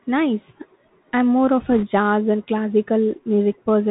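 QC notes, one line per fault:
Throughout: Bluetooth CVSD headset codec. The speech is plainly band-limited, with nothing above 4 kHz, and carries a granular hiss. Sibilants sound scratchy and loud bright sounds distort as the one-bit adaptive step fails to keep up, which fits a 64 kbps CVSD headset stream.
1.72 to 1.84 s: bit errors on a Bluetooth voice link. A brief rushing, crackly noise rides over the speech for about 120 ms. Each flipped bit nudges the waveform only slightly and the error fades, so there are no sharp clicks. The density suggests an error rate of a percent or two.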